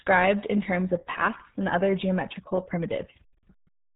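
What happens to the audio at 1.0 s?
At 1.0 s you're hearing the same RealAudio 14.4 codec damage that runs through the whole clip. The speech has been squeezed through a very low-rate coder, which fits the 8 kbit/s dial-up era stream, so nothing gets through above about 3.8 kHz and the compression artefacts are heavy. The result sounds muffled and gargly, with the sharpness stripped off consonants.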